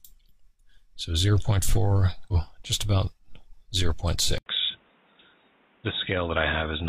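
A short burst of damage sits between 2.28 and 2.33 s. It is damaged data in a compressed stream. For about 50 ms the decoder gets bytes it cannot read as valid frames. It loses its place and hunts for the next frame header. The result is a brief chirp or blip that cuts into the sound. Then normal decoding resumes. At 4.38 s there is a gap of 80 ms of silence. After it, the sound runs to the end with a clearly different character. Nothing is left above 3.8 kHz, so the top end is gone and the audio turns dull and boxy. The level also falls by around 5 dB. A new background noise appears, roughly 35 dB below the signal. This is most likely the input switched to a poorer device partway through the recording. That would explain the narrower band, different tone, lower level and changed noise.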